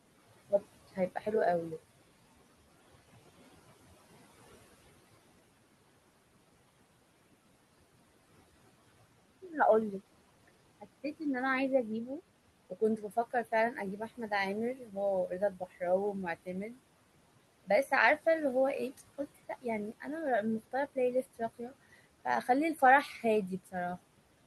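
Noise suppressor artifacts run the whole way through: the room noise, about 18 dB under the speech, gets pushed down about 17 dB between phrases and creeps back underneath. Then the suppressor cuts speech too, at 10.48–11.21 s, 12.7–16.78 s, 18.98–20.05 s and 20.6–23.74 s, dropping soft bits by up to about 15 dB. Consonants and word endings sound swallowed, with the most affected speech, about a second in all, across the 12.7 s stretch.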